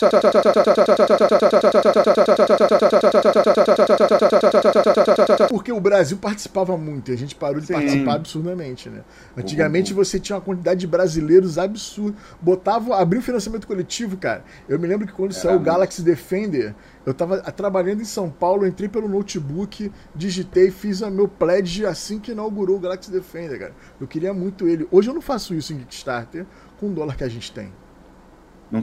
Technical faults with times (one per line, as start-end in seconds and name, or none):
0.00-5.50 broken-record loop